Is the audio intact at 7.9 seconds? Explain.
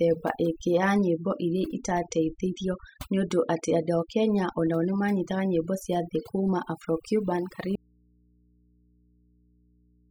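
No. An audio dropout to a faint residue begins at 7.76 s and runs to the end. The speech cuts off abruptly, leaving only a low mains hum around 35 dB below the signal, likely from a lost source feeding a still-live input. Overdone noise removal also applies throughout: frequency bands near the noise estimate are pushed far down, so quiet parts of the speech vanish with them, leaving twinkling specks.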